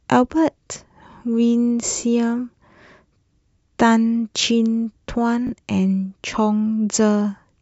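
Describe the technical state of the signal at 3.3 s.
At 3.3 s the speech signal is intact, with no audible fault at that moment.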